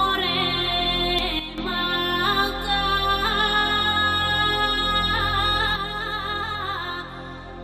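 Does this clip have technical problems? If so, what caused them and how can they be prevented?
Yes. At 1.19 s there is a short glitch, the mark of damaged data in a compressed stream. The decoder misread corrupted bytes, lost frame sync and skipped to the next header. Sending the stream over a checked, error-correcting transport and verifying files with checksums prevents this.

The level falls by about 8 dB at 1.39 s and comes back at 1.58 s, then falls by about 6 dB at 5.76 s and stays down to the end. This is a sudden gain jump, likely from a digital gain setting applied between two samples without a ramp. The background noise drops by the same amount at the same instant, which separates it from a source moving away or a compressor, both of which change gradually. Ramping every gain change over a few milliseconds prevents it.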